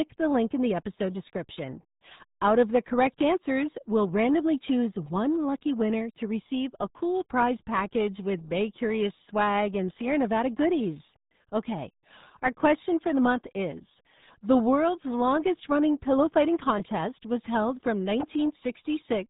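RealAudio 14.4 codec artefacts run through the whole speech clip. The sound stops dead at about 3.8 kHz, and the heavy coding damage leaves it muffled and gargly, which fits RealAudio 1 squeezing the signal into an 8 kbit/s dial-up stream.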